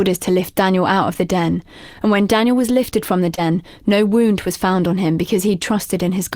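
At 3.35 to 3.39 s, a short concealed packet loss: 20 ms of speech reached the decoder too late, so the receiver stretched the preceding sound over the gap and blended back. The result is a brief smear, not the silent hole of an unconcealed dropout.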